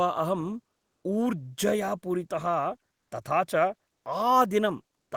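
No technical faults occur at any point in the recording, so there is nothing to describe.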